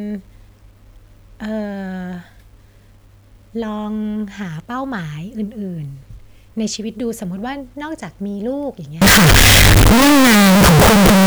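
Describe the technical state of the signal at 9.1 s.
At 9.1 s the speech sits inside a stretch of very loud, harsh distortion running from 9.02 s to the end at 11.26 s, with quiet passages as loud as everything else. The likely cause is signed and unsigned mixed up in the 8-bit samples, flipping the top bit so each zero crossing leaps across the full range. On a waveform it appears as a block pinned near both rails, and on a spectrogram as dense broadband energy filling every frequency.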